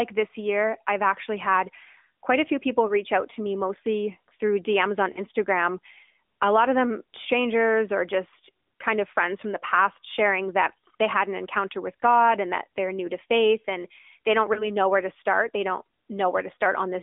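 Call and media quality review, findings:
AMR narrowband mobile codec, whole clip: buzzy, synthetic band-limited speech, roughly 250 Hz to 3.6 kHz, consistent with AMR-NB near 10.2 kbps. Spectrogram shows nothing above 4 kHz.

Lost AMR speech frames: brief warbly dips at 2.86–2.94 s (after "quite a few people"), 5.12–5.20 s, 10.88–10.91 s and 14.54–14.68 s (before "know where to start"). The decoder repeats its last good frame with falling gain, which shows in the waveform as short envelope sags.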